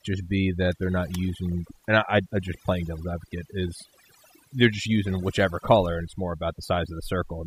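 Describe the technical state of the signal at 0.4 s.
At 0.4 s the speech is under overdone noise removal, which runs through the whole clip. Frequency bands near the noise estimate are pushed almost to zero, so the background drops and breaks up into twinkling specks. Unlike a plain low-pass, the loss comes and goes band by band.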